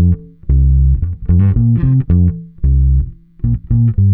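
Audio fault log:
Nothing stood out on listening to this clip.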